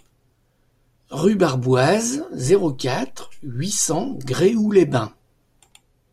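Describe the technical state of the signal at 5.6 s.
At 5.6 s the speech signal is intact, with no dropout, clipping, glitch or other fault audible at that moment.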